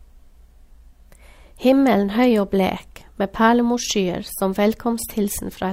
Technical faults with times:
none

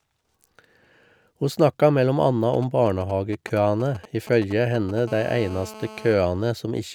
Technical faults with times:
2.54-5.00 GSM signalling bursts
5.08-6.14 GSM phone buzz

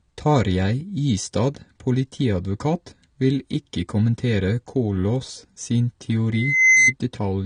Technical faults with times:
0.00-7.46 AAC compression
6.32-6.93 loudspeaker feedback squeal

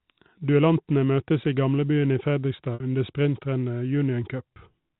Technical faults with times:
2.74-2.80 packet loss with pitch repetition
4.55 packet loss with pitch repetition

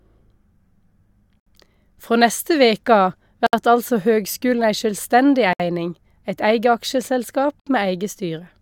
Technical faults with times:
1.40-1.46 gap at a join of encoded pieces
3.46-3.53 gap at a join of encoded pieces
5.53-5.60 gap at a join of encoded pieces
7.60-7.66 gap at a join of encoded pieces

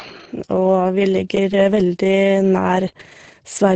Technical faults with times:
none

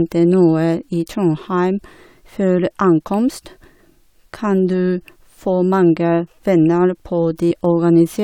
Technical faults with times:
7.50 compressed frames skipped

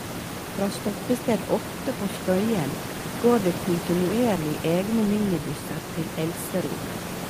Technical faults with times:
none

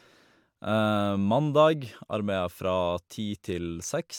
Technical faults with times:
none

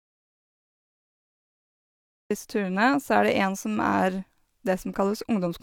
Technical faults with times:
0.00-5.63 low-bitrate audio saved at a high bitrate
0.00-2.31 audio dropout to silence

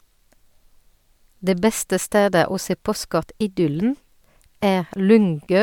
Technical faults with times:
none

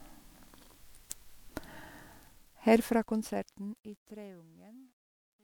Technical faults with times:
0.00-5.43 generation loss
2.18-5.43 truncation distortion on a fade

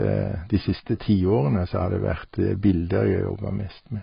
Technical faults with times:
0.00-4.03 AAC compression

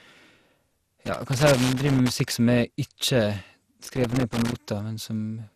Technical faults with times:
0.00-5.55 generation loss
1.05-2.33 loose connector crackle
3.86-4.59 loose connector crackle

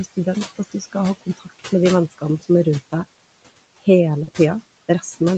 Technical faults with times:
0.00-5.37 noise suppressor artifacts
0.56-0.96 speech cut by the noise suppressor
1.21-1.68 speech cut by the noise suppressor
4.23-4.29 short concealed packet loss

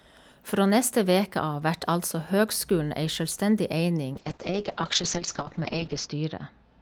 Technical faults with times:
4.15-6.81 call bitrate drop

